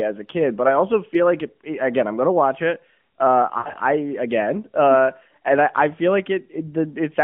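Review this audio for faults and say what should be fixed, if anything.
Lost AMR speech frames between 3.58 and 3.76 s, just before "I again uh and". About 120 ms of speech is missing, scattered over 160 ms, with the longest gap 80 ms. That fits six dropped 20 ms frames. The decoder repeats the last good pitch and vocal-tract settings at falling gain, so the sound smears, fades, and returns rough.

On a spectrogram, the narrowband harmonics below 3.4 kHz stretch flat and dim toward silence. On the waveform, the envelope sags in short steps.

Stronger error protection on the radio link, or redundant frame transmission, would prevent it.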